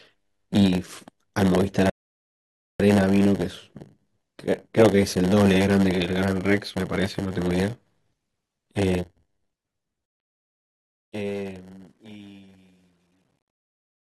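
A block size mismatch (padded) runs through this speech clip: one stage hands on shorter blocks than the next one reads, and each block is topped up with zeros. The gaps repeat at 100 Hz, laying a steady buzz over the whole recording, and the speech plays at 0.919 times normal speed, about 8% slow, with its timbre unchanged. From 1.90 to 2.80 s a rebuffering stall occurs: the player runs out of downloaded audio and waits, so the sound drops to silence for about 0.9 s and then resumes exactly where it stopped, with nothing lost. The fade-out begins around 10 s, but the stage applying it keeps only 11 bits without dither, causing truncation distortion on a fade from 10.06 s to the end. As the level sinks toward the smallest step the waveform turns into coarse square steps, and from 11.90 s the tail becomes gritty.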